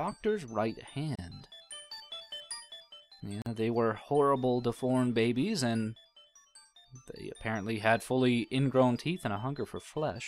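At 1.16 s and again at 3.42 s there is a gap at a join of encoded pieces, about 32 ms and 44 ms long, where separately encoded segments were joined with their start delay and end padding intact. The sound stops briefly, then resumes where it left off. A spectrogram shows a narrow vertical blank band with smeared edges, and the waveform shows a short dropout.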